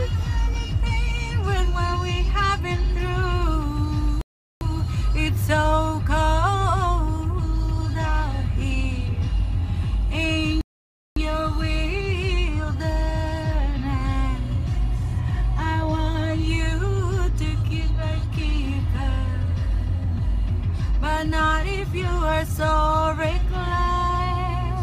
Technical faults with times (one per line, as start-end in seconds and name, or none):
4.21-4.61 rebuffering stall
10.61-11.17 rebuffering stall